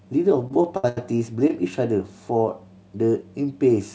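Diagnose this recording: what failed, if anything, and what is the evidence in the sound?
Network delay reaching the jitter buffer caused repeated stalls (stutter) between 0.42 and 0.98 s. Packets arrived late five times, and the receiver filled each gap by extending the last sound, about 0.2 s of fill in total and roughly a third of that span. The longest gap was 82 ms. The speech drags and judders without losing anything. On a waveform these are stretched, repeating cycles. A spectrogram shows smeared, frozen harmonic bands that fade during the longer gaps.

A single short stall from a late packet occurs at 1.48 to 1.50 s, again at the network and jitter-buffer stage. The packet arrived 19 ms late, and the receiver held the preceding sound for 19 ms before resuming where it had stopped, so nothing is missing. The held sound has a slight buzz or dip. On a spectrogram it is a brief flat smear. 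On a waveform it is a few duplicated periods. The band-limit above 8 kHz fits a wideband call codec such as G.722.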